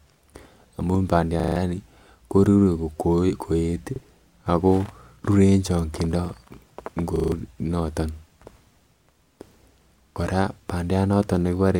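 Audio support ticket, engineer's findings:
Repeated buffer, speech, four events. 1.40–1.56 s and 7.16–7.32 s: same 40 ms slice heard five times, hard join at each repeat, rapid stutter, roughly 150 ms of speech missing. 3.96–4.00 s and 10.12–10.16 s: single 40 ms repeat, brief glitch. Repeat length fits a 40 ms playback buffer. Probable component: output device or driver. Mechanism: new audio late, device replayed the last buffer.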